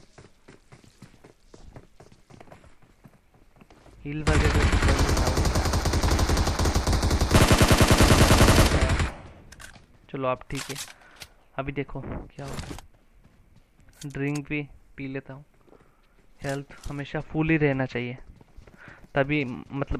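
No technical faults can be heard anywhere in the audio, and the signal stays steady and intact throughout.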